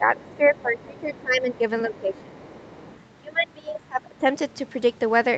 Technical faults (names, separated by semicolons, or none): speech suppressed in double talk; other side's voice leaking through